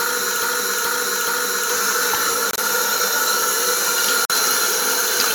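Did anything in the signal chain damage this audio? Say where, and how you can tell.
Yes. The audio is already caught in a broken-record loop when it begins. From 0.0 to 1.7 s, a fragment of about 425 ms repeats exactly, back to back, three times. This was likely a stall in the playback or streaming stage, which kept re-sending the last buffer it held. On a waveform you see identical 0.43 s blocks tiled end to end. On a spectrogram the same pattern stamps out at a fixed period. Whatever should have played in that time is gone.

The second fault is corrupt frames being muted at the codec stage. There are two abrupt holes: from 2.50 to 2.61 s, and from 4.25 to 4.33 s. Each one is a whole number of frames long, consistent with short frames of roughly 20 to 25 ms, which points to a decoder rejecting damaged compressed frames and the player filling in silence. On the waveform the signal drops straight to a flat line with a hard edge. 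On the spectrogram these show as clean, full-band vertical gaps. The sound resumes exactly on time after each gap, so timing is preserved.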